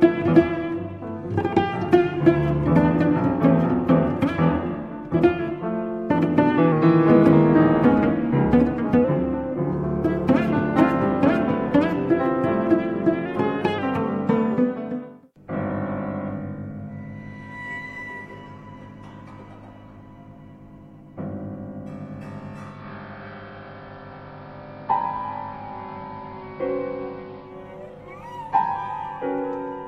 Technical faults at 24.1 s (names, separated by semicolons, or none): digital radio blending to analogue